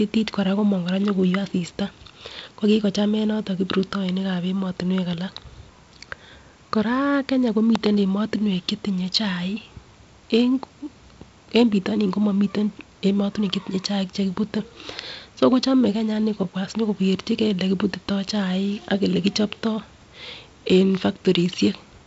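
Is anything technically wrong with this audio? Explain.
No, nothing is technically wrong.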